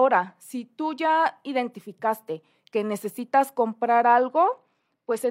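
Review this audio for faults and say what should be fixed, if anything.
Bluetooth SBC bit pool drop, 4.04 to 5.30 s: the speech dulls and turns gritty as the encoder starves the upper sub-bands and coarsely quantises the rest, consistent with a bit pool falling from 31 to 12, around 88 kbps. To prevent it, keep the Bluetooth link uncongested or use a wired or higher-quality codec path.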